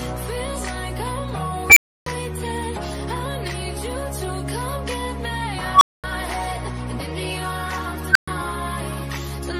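An unstable filter, a recursive stage whose feedback grows without limit until its values overflow, fires three times. At 1.70 s a squeal near 2 kHz swells over 66 ms, then cuts to 0.30 s of silence. At 5.71 s one near 1 kHz builds over 100 ms before a 0.23 s gap. At 8.11 s one near 1.5 kHz builds over 40 ms before a 0.12 s gap.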